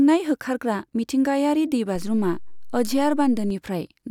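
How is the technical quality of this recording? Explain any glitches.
The recording has one clear technical fault, a DC step. A DC step occurs at 1.96 s, right after "होखारग्रा मिथिंगायारि", and lasts until 3.50 s. The waveform's zero line abruptly shifts by about -29 dBFS, as if an offset were suddenly added at the converter or input. The shift holds for about 1.5 s and then drops back to zero. Each jump is heard as a low thump or click, one at 1.96 s and one at 3.50 s, while the speech continues unchanged.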